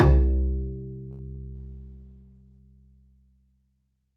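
At 1.11 s the sound hangs for a moment, with the last instant drawn out until about 1.21 s, a faintly buzzy hold rather than a gap. This is a short stall from a late packet. The packet arrived after its playout time, so the jitter buffer emptied and the receiver extended what it already had for about 75 ms. It then resumed from exactly where it had stopped, so nothing is lost, but playback now runs about 75 ms later than before.

Between 1.35 and 1.39 s there is a tiny smear, like a brief wobble in the sound. This is short concealed packet loss. About 20 ms of audio never reached the decoder in time. The receiver covered roughly 19 ms of that hole by continuing the preceding sound, either from its pitch or as shaped noise, then crossfaded back into the real signal, so what was in that sliver is gone rather than delayed.

From 1.56 s the sound turns rough and dull, with the top end thinned and a watery coarseness, and this lasts until about 2.67 s. 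This is a call bitrate drop. The bandwidth estimate fell and the encoder's rate was cut from 64 kbps to 16 kbps, staying at that floor for about 1.03 s. At that rate Opus quantises more coarsely and trims high frequencies, which causes the muffling, until the rate climbs again.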